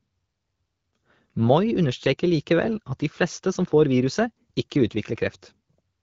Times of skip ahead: none

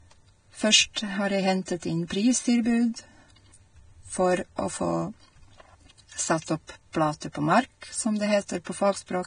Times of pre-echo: 0.93-0.96, 1.65-1.68, 6.92, 7.20, 8.64

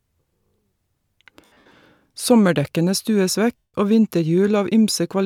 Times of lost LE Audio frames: 1.45-1.71, 3.59-3.74

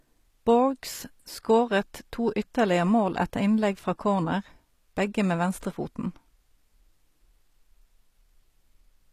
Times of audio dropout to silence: none

